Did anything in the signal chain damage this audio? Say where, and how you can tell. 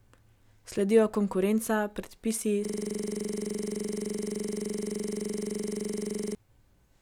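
Yes, at the driver/buffer stage there's a system hang loop. Right after "konkurenca predpisi", from 2.65 to 6.35 s, one 42.67 ms slice repeats nearly ninety times, a rough 23.4 Hz buzz-stutter. The system froze while the hardware kept replaying its ring buffer, which fits a 2048-sample buffer.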